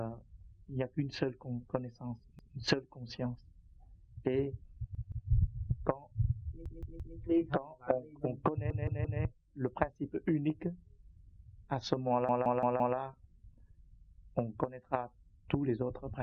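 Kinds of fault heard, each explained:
repeated buffer: When fresh audio arrives late, the device replays the block it already holds. Each repeated block here is about 170 ms long, which fits an 8192-sample buffer, so the fault is heard as a stutter of a whole segment rather than a click. It occurs at 2.39 s (one extra play), 4.95 s (two), 6.66 s and 8.70 s (three each) and 12.29 s (four), with a hard join at every repeat and essentially no audio lost.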